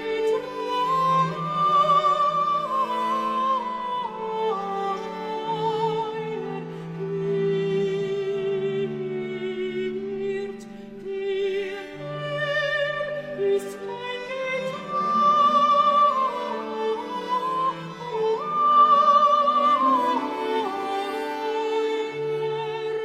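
Nothing stood out as a technical problem on listening.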